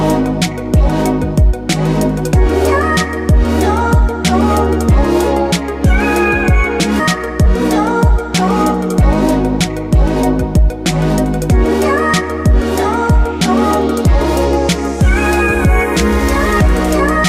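At 6.99 s the audio skips ahead: about a second of sound never arrives, likely dropped in transit or discarded by an overflowing jitter buffer, so playback leaps forward with no filler. On a waveform or spectrogram the two sides butt together abruptly, with no gap.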